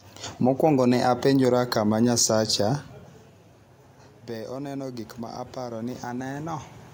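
From 4.27 s to 6.72 s, automatic gain rising: after the talker draws back from the microphone around three seconds, the input level falls by about 14 dB, and the gain control responds by slowly raising its gain by about 6 dB. Because the boost applies to everything at the microphone, the voice and the room noise swell upward together across those two and a half seconds, a gradual lift rather than a sudden jump.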